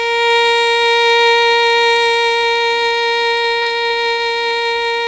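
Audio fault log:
3.42–4.77 s, repeated packet loss (robotic sound): eight quick dropouts, longest 36 ms, each patched by repeating the last bit of music, so it goes choppy with pieces missing.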